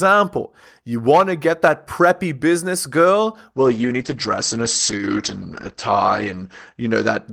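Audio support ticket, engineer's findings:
Call bitrate drop from 3.55 s to end of clip. Speech turns rough and watery, top end dulled. Encoder bitrate falls from 40 kbps to 9 kbps, lowest for about 2.75 s. Audio bandwidth narrows from 20 kHz to 8 kHz. Component: sender's bandwidth estimator throttling the Opus encoder. Coarser coding plus high-frequency cut. No recovery before clip ends.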